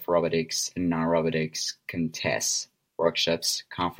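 Nothing goes wrong anywhere in this short bit of speech, so there's no fault to point to at any moment.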